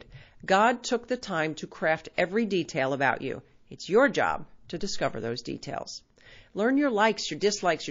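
Throughout the speech, a low-bitrate encoder, likely MP3 at around 32 kbps, is short of bits, so it drops weak frequency lines that flicker between frames. The result is a plainly audible watery, swirling texture, with smeared consonant attacks.

From 2.14 to 2.18 s, between "the time to craft" and "every detail about you", a pre-echo occurs. The encoder kept long transform windows of about 72 ms and never switched to short blocks, so quantisation noise meant for the loud onset spread 42 ms ahead of it, rising about 15 dB. That is heard as a brief hiss before a softened attack.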